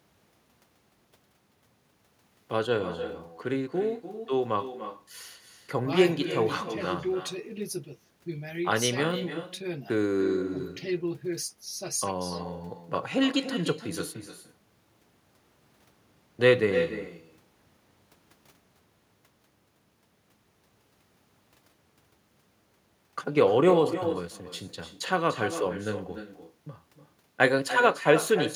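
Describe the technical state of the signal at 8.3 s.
At 8.3 s you're hearing echo with no canceller, present through the whole clip: the far end's speaker leaks into its mic, so the speech returns roughly a third of a second later, about 10 dB down.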